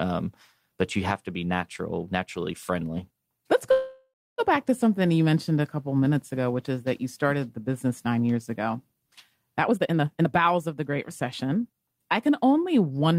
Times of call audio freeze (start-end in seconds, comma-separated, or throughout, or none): 3.71-4.40